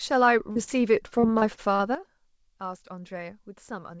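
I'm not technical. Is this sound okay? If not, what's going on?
No. From 0.52 to 1.82 s there is repeated packet loss (robotic sound). Pieces of the audio went missing eight times, each gap up to 42 ms. The call software filled each hole by stretching the last sound, so about a fifth of that stretch sounds choppy and robotic.

At 1.95 s there is a sudden gain jump. Everything abruptly gets much quieter, background included, and stays that way to the end. The likely cause is a volume setting applied instantly instead of being eased in.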